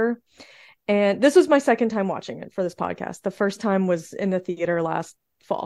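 No technical faults can be heard anywhere in the recording. There is nothing in the audio to report on the technical side.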